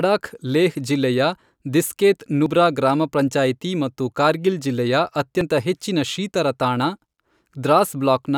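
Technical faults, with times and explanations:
2.46 s and 5.41 s, audio missing between chunks: the speech jumps forward abruptly at each point, as though a small sliver of sound, roughly a twentieth of a second, has been skipped, with the two sides butted together and no gap of silence between them. The likely cause is a recorder or processor working in 3 s chunks that drops a short piece while closing one chunk and opening the next, which explains why the skips recur at a regular spacing.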